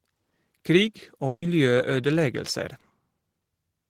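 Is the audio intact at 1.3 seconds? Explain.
No. A burst of packet loss runs from about 1.27 to 1.43 s: a string of packets never arrived in time to be played, so the receiver concealed the hole by stretching the last good sound across roughly 150 ms and fading it down, ending in about 30 ms of silence. The speech sounds smeared into a held, decaying buzz or hiss, then resumes abruptly with around 150 ms of the original speech missing.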